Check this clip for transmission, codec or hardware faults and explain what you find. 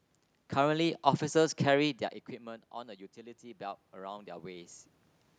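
One fault is audible in this speech clip: automatic gain rising, from 3.14 s to 4.77 s. The input level drops by about 17 dB, the gain control treats the signal as too quiet, and it raises its gain by about 6 dB over roughly one and a half seconds. Because the gain applies to the whole signal, the voice and the room noise swell together, a slow lift rather than a jump. The level changes around 2 s and 4.5 s come from the talker moving relative to the microphone.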